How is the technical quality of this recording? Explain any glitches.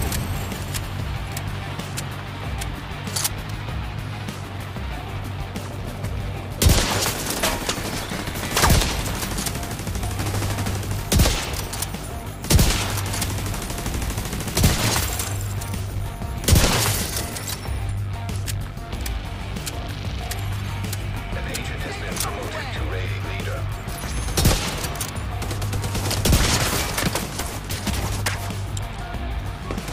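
The recording has two drift correction steps. The likely cause is clock-matching software abruptly changing the playback rate to refill or drain its buffer, rather than easing it gradually. From 3.26 to 4.34 s, and again from 14.12 to 14.72 s, the sound runs about 6% fast, so speed and pitch rise together by roughly 100 cents, a full semitone. Each time it then snaps back to normal, heard as a sudden detuning and return.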